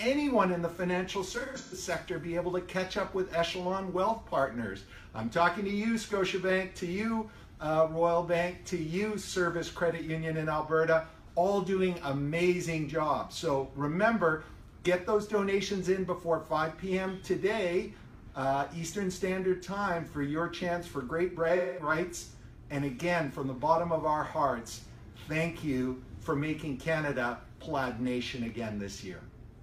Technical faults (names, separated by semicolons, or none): AAC frame loss with concealment